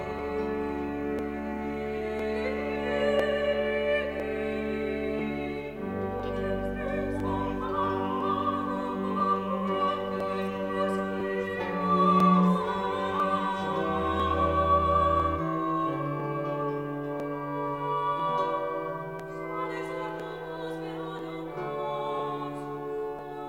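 From 0.19 s to 23.19 s, periodic USB or driver dropouts skip about a millisecond every 1.0 s, giving evenly spaced ticks heard only during sound, unlike random clicks.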